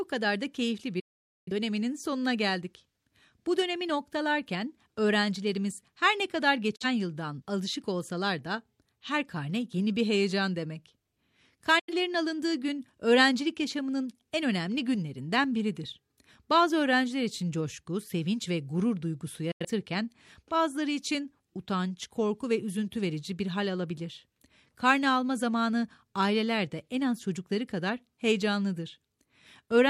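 Digital broadcast dropouts occur at 1.00–1.52 s (after "kadar da keyifli", before "sonuna geldik"), 6.76–6.86 s (after "öğrencilerimiz her ne kadar"), 11.79–11.93 s (before "alındığı gün öğrencilik yaşamının") and 19.51–19.65 s. The receiver mutes on corrupted frames with an 8 ms fade, so the speech is lost for about 470 ms at first and 43–85 ms afterwards.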